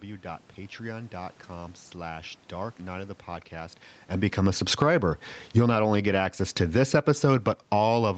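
From 4.21 to 5.8 s, right after "of the podcast and", the automatic gain is falling: the control judged the input too loud or its background noise too strong and pulled its gain down by about 13 dB, so the speech and its room noise sink together. It falls again from 6.58 to 7.98 s, after "only get access", by about 8 dB. On a waveform the envelope tapers smoothly, and on a spectrogram the whole band below 8 kHz, noise floor included, dims evenly.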